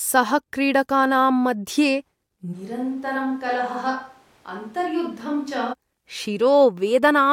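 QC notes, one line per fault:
2.55–5.72 s, switch to a distant microphone: the close mic's feed likely dropped out, leaving only a far-off pickup, so the speech abruptly turns roomy and hollow with thinner bass, falls about 10 dB, and room noise rises to roughly 30 dB below the speech, snapping back at 5.72 s.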